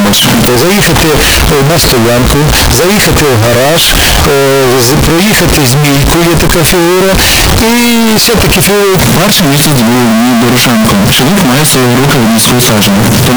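From start to finish the audio is blasted into a harsh, uniformly loud buzz, with quiet background noise as loud as everything else: a float read as integer fault, likely 32-bit float samples decoded as 32-bit integers. The waveform looks nearly square at an almost fixed, high level, and the spectrogram is smeared with broadband energy.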